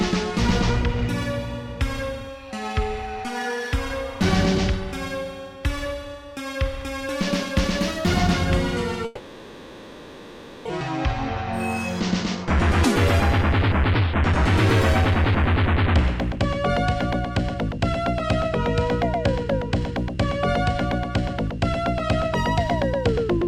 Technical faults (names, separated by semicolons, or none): long network dropout; jitter buffer speed-up